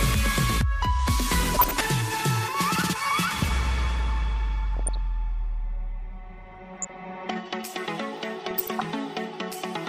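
Four short bursts of DAB burbling break up the audio, at 1.54 to 1.85 s, 4.75 to 4.97 s, 6.51 to 6.90 s and 8.50 to 8.92 s. Each puts short blips of noise into single sub-bands. Weak reception let bit errors slip past error correction into the MP2 data. The first burst has the highest error rate, around 1 percent, with the others nearer half that.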